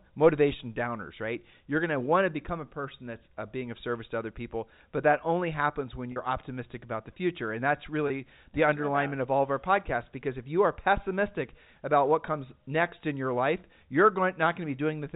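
At 6.12 to 6.16 s there's a 40 ms dropout, then a 20 ms one at 8.08 to 8.10 s. Both are packet loss with pitch repetition: the receiver loops the last pitch period to fill each hole, so the speech briefly holds on a slightly buzzy tone. The gaps fit two and one lost 20 ms packets, all over an intact G.711 telephone band.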